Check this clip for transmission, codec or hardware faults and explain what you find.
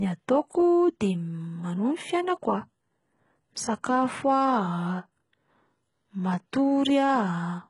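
There's one fault, and it runs through the whole clip: HE-AAC compression, heavily damaged. The speech stops dead around 11.1 kHz, and the top end sounds pasted on. That's likely spectral band replication copying lower bands upward, which fits roughly 12 kbps, so sibilants come out gritty and lispy.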